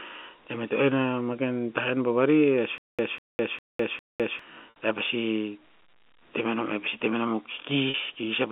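A stutter with silent gaps runs from 2.78 to 4.39 s. A fragment of about 197 ms plays, then roughly 206 ms of dead digital silence follows, and the pair repeats four times at a steady 403 ms period. The likely cause is a stalled player or stream that replays its last buffered chunk at each retry and then runs dry. Whatever audio belonged in that stretch never arrives and is simply gone.

Packet loss with pitch repetition follows at 4.70 to 4.76 s, a 60 ms hole, and again at 7.90 to 7.94 s, a 40 ms hole. Those gaps fit three and two lost 20 ms packets. To cover each loss, the receiver loops the final pitch period it received, which briefly holds the speech as a slightly buzzy, frozen tone. It fades that tone out before normal audio cross-fades back in. Both repairs sit inside the narrow 200 Hz to 3.4 kHz telephone band of the G.711 A-law line.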